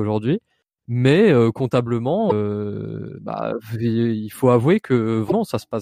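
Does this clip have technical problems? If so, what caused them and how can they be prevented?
Yes. There is damaged data in the compressed stream: corrupted bytes made the decoder misread frames and lose sync until it found the next frame header. This produces brief glitches in the speech at 2.26 to 2.32 s and 5.27 to 5.32 s. Using checksummed, error-protected transfer and verifying file copies would prevent it.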